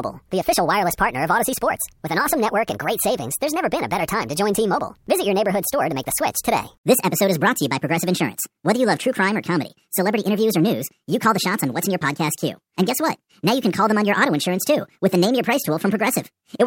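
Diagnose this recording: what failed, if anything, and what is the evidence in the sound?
The failure is at playback: a wrong sample rate. Across the whole speech clip, the voice runs one and a half times too fast and sits about 7 semitones high, a fifth above where it should be, giving a hurried, chipmunk-like quality. Speed and pitch rise together by the same factor, with no change in timbre beyond that shift, which fits 32 kHz material clocked out at 48 kHz without any rate conversion.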